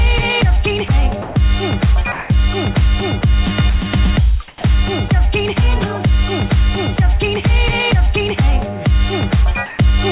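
Brief gaps where the sound itself vanishes into a flat hiss occur at 0.88 s (a 20 ms blip), from 1.22 to 1.36 s, and from 4.48 to 4.64 s, where 70 ms of actual sound is lost inside a 160 ms stretch of steady noise. This is sound dropped by the voice detector: the sending side likely judged these quieter moments to be background, stopped transmitting, and the receiver filled the hole with synthetic comfort noise until the detector triggered again. In two pauses the real background is swapped for a smoother, featureless hiss: from 2.12 to 2.30 s, where the background sits about 19 dB below the loudest sound and the level shifts by about 3 dB, and from 9.66 to 9.78 s, about 22 dB down with a shift of about 1 dB. That is likely comfort noise in place of the background, where discontinuous transmission halts sending during silence and the far end generates noise roughly matched to the room. 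The whole clip also carries the narrowband sound of the call path, with nothing above 4 kHz, which fits G.711 A-law at 64 kbps.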